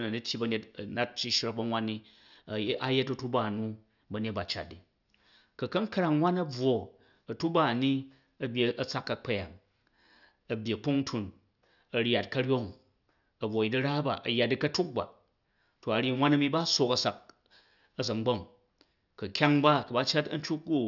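No technical faults turn up anywhere in the recording, so there is nothing to describe in time order.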